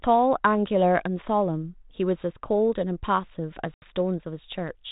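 Speech over a 32 kbit/s G.726 ADPCM link, with packet loss on the ADPCM call at 3.74 to 3.95 s: about 80 ms drops to a hard-edged hole, then returns slightly distorted while the decoder's predictor catches up.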